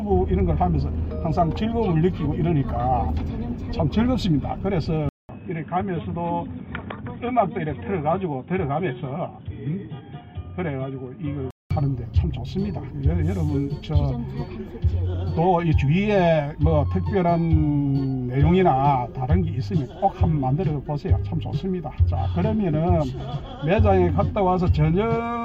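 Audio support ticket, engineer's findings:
Input switched to a poorer device, 5.09 to 11.71 s. Sound abruptly dull and boxy, nothing above 3.8 kHz, level down roughly 5 dB, new background noise around 40 dB under the signal. 200 ms silence at the 5.09 s switch. Likely capture moved to a narrower-band microphone or headset call profile, then restored at 11.71 s.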